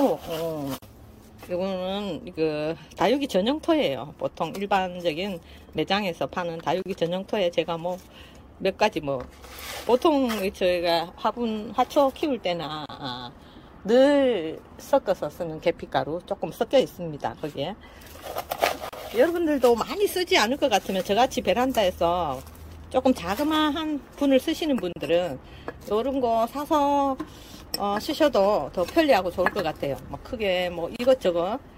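Short dropouts of about 34 ms, the first closer to 39 ms, land at 0.78, 6.82, 12.86, 18.89, 24.93 and 30.96 s, every 6 s. Each is a gap at a join of encoded pieces: separately encoded chunks butted together with their start-up delay and end padding left in, so the sound cuts out and picks up where it stopped.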